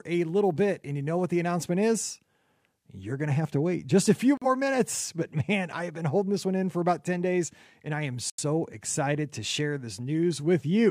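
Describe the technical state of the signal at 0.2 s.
At 0.2 s the speech signal is intact, with no dropout, clipping, glitch or other technical fault audible at that moment.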